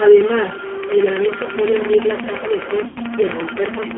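A data line or converter likely has one bit stuck at a fixed value for the whole recording. About half the samples land off by that bit's weight in a pattern set by the waveform, so the speech carries added distortion, and the pauses do not fall silent but fill with a gritty noise floor, since the bit flips its effect as small values cross zero.

Running alongside it throughout is G.729 coding. The speech has been squeezed through a low-rate VoIP codec that rebuilds it from a vocal tract filter, a pitch predictor and a handful of pulses per frame, with the sound pointing to the 8 kbit/s G.729A variant. Everything sits inside a telephone band of about 200 Hz to 3.4 kHz, so the top end is gone, and the coding damage is plainly audible as a rough, slightly synthetic texture.

From 0.84 s to 3.92 s a train of clicks rides over everything, likely interference from nearby equipment or a faulty connection injecting a pulse again and again. 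The clicks come at a steady 11.7 per second, around forty in all, each much the same shape and peaking roughly 15 dB above the speech. They form a regular ticking that continues straight through the pauses.

Between 2.88 s and 3.0 s there is VoIP packet loss concealed by the speech codec. About 80 ms of audio went missing, which fits four 20 ms packets. The decoder filled the gap by extending its last pitch and filter settings while lowering the gain frame by frame, so the speech smears into a fading buzzy tone or coloured noise and stays weak and distorted for a short while after the stream resumes.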